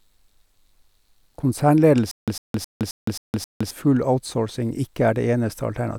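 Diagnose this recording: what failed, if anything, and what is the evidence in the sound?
Playback or stream buffering failed, producing a stutter with silent gaps in the speech from 2.11 s to 3.71 s. A burst of about 101 ms repeats six times at a steady 266 ms period, each followed by roughly 165 ms of digital silence. The likely mechanism is a stalled buffer: at every retry the last fragment was replayed before the queue ran dry again, so the audio due in that span never played and is missing.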